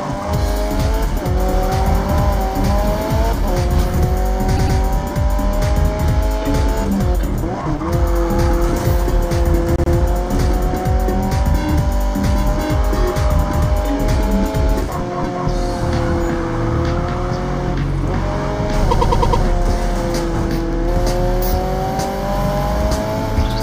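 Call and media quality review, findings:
Repeated frames: compressed frames resent or rewritten in the encoder/transport path, so the decoder replays them. Stutter at 4.56–4.77 s (104.5 ms block, twice more), 9.76–9.92 s (78.4 ms block, twice more), 18.90–19.42 s (104.5 ms block, five more); clip lengthened accordingly.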